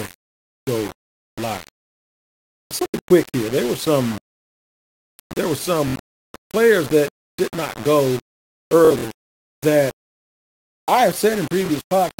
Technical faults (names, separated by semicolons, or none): low bit depth without dither; Bluetooth stutter